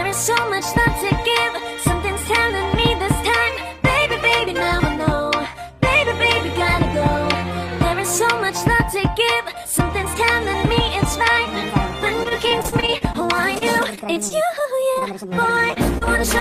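From 12.23 to 15.08 s the sound turns choppy, with small pieces dropping out in quick succession. This is repeated packet loss. Audio kept arriving late or not at all, and each hole, the longest about 37 ms, was patched by stretching the sound just before it. Around 12% of the stretch is synthesized fill rather than real signal.

Near the end come three brief blips: a smear from 15.74 to 15.78 s, a wobble from 15.98 to 16.03 s, and another at 16.39 s. Each is short concealed packet loss, where about 20 ms of audio failed to reach the decoder in time. The receiver carried the preceding sound forward to cover the hole, then blended back into the genuine signal.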